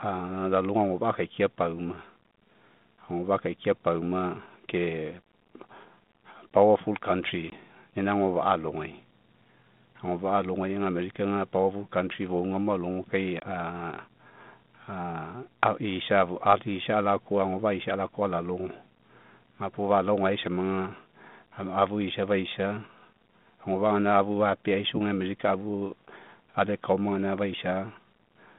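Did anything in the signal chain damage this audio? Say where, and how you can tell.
Yes. The damage happened on the network during an ADPCM call. Packet loss dropped about one 20 ms packet at 7.50–7.52 s, just before "ina agofa'a", and again at 13.40–13.42 s. Each time there is a hard-edged hole. The G.726-style decoder's predictor and step size then fall out of step, so the speech returns briefly, slightly distorted.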